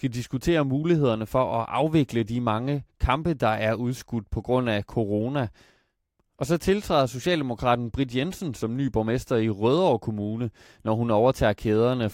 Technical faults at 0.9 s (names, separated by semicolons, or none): none